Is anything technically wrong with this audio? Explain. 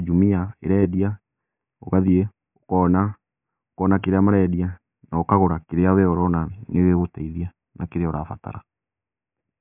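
No, nothing here sounds technically off; it's a straightforward speech recording with no faults to point out.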